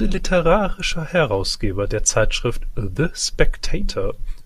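No technical faults are audible.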